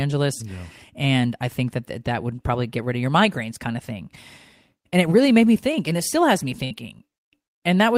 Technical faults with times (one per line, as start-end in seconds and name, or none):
6.64-6.73 burst of packet loss